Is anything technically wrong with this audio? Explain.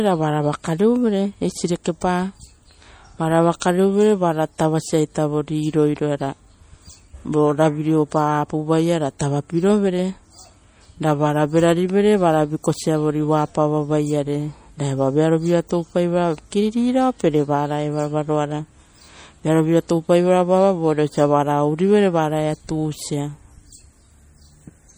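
Yes. Throughout the speech there is MP3 compression damage, plainly audible, with a watery, swirly quality and metallic chirps on s sounds. This is likely because too few bits were available: the smearing fits a low bitrate near 48 kbps, so weak frequency lines get zeroed and flicker between frames. A spectrogram would show patchy, blinking high-frequency regions and nothing above 21 kHz, and the waveform would show softened attacks.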